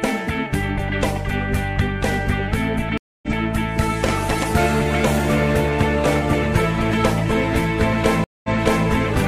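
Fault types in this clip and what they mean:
Stream reconnect: the connection dropped twice and the player rejoined with a fresh decoder mid-stream. Near 2.98 s the sound cuts out for about 249 ms and comes back roughly a fifth of a second further on, so a short stretch is skipped. Near 8.24 s a 198 ms gap is followed by a resend that restarts 418 ms earlier, repeating material. Each return starts muted or faded in.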